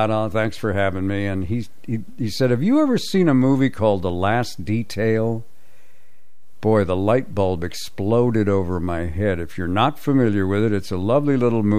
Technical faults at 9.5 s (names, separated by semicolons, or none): DC offset